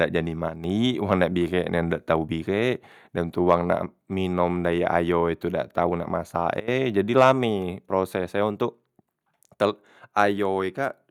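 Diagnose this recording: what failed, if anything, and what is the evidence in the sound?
A digital gain stage, likely in the driver or call processing, stepped its level with no ramp. At 0.48 to 0.64 s the speech and background noise drop together by about 6 dB, and at 6.6 to 6.68 s by about 17 dB, each an abrupt sudden gain jump.

Microphone overload at the converter input, likely from the input volume set too high, drives peaks past full scale so their tops are flattened. This adds a harsh, crackling edge at 3.49 to 3.55 s (about 3 dB over), 7.18 to 7.31 s (about 4 dB over) and 10.19 to 10.22 s (about 1 dB over), with only a few percent of samples clipped.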